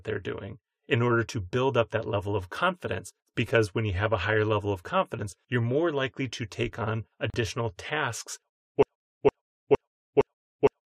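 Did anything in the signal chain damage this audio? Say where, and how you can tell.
Yes. At the codec stage, separately encoded pieces were joined without trimming each run's start delay and end padding, causing a gap at a join of encoded pieces: the speech drops into a roughly 39 ms gap from 7.30 to 7.34 s, with smeared edges, then resumes where it stopped.

At playback or in the stream, a stall likely left the last buffered fragment being resent, producing a broken-record loop. From 8.83 s to the end, a 0.46 s piece of speech repeats exactly, back to back, five times, and the audio that belonged there is lost.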